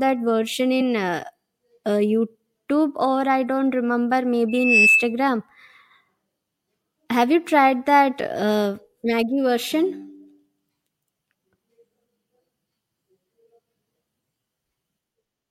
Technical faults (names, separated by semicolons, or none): loudspeaker feedback squeal